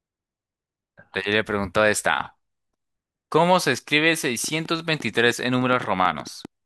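Speech, with a train of clicks from 4.44 s to 6.46 s: around fifteen same-shaped ticks at about 6 per second, unevenly spaced and peaking roughly 5 dB above the speech, likely from nearby interference or a faulty connection. Unlike random crackle, the clicks repeat one shape.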